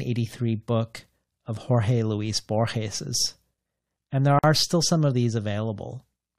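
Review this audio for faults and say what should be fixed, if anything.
A gap at a join of encoded pieces opens from 4.39 to 4.44 s, between "and there" and "still some of these": a 48 ms silence, seen as a blank vertical band with smeared edges. The speech was encoded in separate segments and spliced with each encoder's start delay and end padding left in. To prevent it, trim encoder delay and padding at every join, or encode the speech as one continuous stream.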